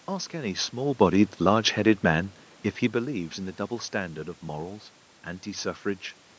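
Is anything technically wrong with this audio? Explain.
No, nothing here points to a technical fault: the room noise sits about 34 dB below the speech and belongs to the recording, the lack of content above 8 kHz and of the lowest bass fits ordinary call microphone processing, and the level changes around 1 s and 3 s sound like the talker moving relative to the microphone.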